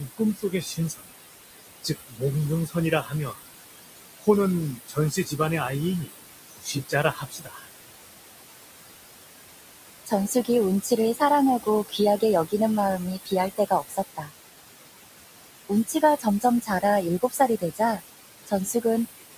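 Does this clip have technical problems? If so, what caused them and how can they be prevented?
Yes. Noise suppressor artifacts run through the whole clip. The room noise, only about 10 dB below the speech, is pushed down by about 19 dB in the gaps and returns under each phrase. A gentler suppression setting or a quieter room would prevent this.

Speech cut by the noise suppressor occurs at 0–1.1, 1.83–3.39, 4.21–7.66, 10.06–12.53, 13.24–14.32 and 15.69–18.85 s. Soft consonants and word endings sink by about 18 to 21 dB, for roughly half a second in most of these spans and about one and a half seconds in the 4.21–7.66 s span. Unlike a dropout, the sound is swallowed rather than falling to silence. Placing the microphone closer, so the speech stands well above the noise, and easing the suppressor would prevent this.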